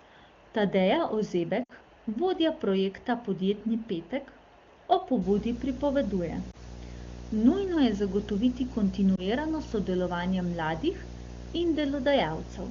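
At 1.63 s, lost AMR speech frames. About 60 ms of speech goes missing, which fits a run of three 20 ms frames. The decoder repeats the last good settings at falling gain. The sound smears, then fades quickly, and returns weak until 1.72 s.

From 5.22 s to the end, video or display buzz is present. A screen or video cable leaks into the audio. A 60 Hz buzz with hash above it sits roughly 15 dB below the speech.

At 6.51 s and 9.16 s, single lost frames occur. Each removes about 20 ms. Each is a brief dip or warble of concealment, lasting until 6.63 s and 9.21 s. Through the AMR wideband (HD Voice) codec at 23.85 kbit/s, the speech between these faults stays clear.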